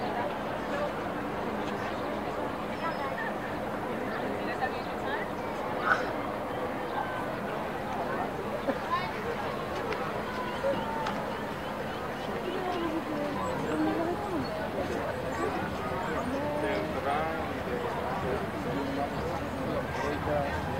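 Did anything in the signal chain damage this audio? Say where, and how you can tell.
Yes. Throughout, the audio carries grainy distortion about 30 dB below the signal that rises and falls with it, which points to low bit depth without dither, likely an 8-bit truncation at sample-format conversion. Dithered reduction would leave a steady hiss instead.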